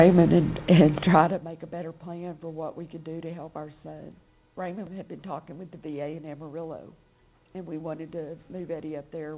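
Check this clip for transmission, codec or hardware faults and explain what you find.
One fault stands out, a burst of zipper noise, heard through a narrowband call path that has nothing above 4 kHz, which fits a G.711-style telephone codec.

From 1.06 to 1.44 s the level drops by roughly 20 dB, but it moves in hard 2 dB jumps, around forty a second, with no smoothing between them. Each jump is a tiny discontinuity in the waveform, so you get a fast ticking, zipping texture riding on the sound while the fade happens.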